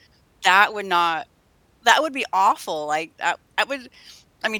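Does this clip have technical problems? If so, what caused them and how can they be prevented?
No, nothing stood out as a technical problem on listening to this recording.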